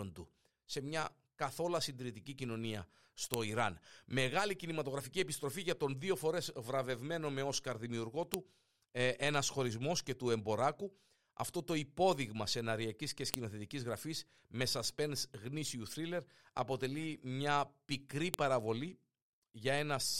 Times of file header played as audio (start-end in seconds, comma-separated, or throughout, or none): 3.34, 8.34, 13.34, 18.34